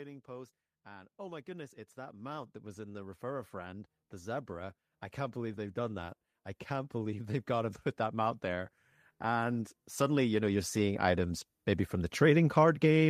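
From 0.25 s to 11.49 s the speech and its background swell together, climbing by about 21 dB before levelling off just ahead of "maybe from the". This is automatic gain rising: the gain control judged the input too quiet and slowly turned itself up.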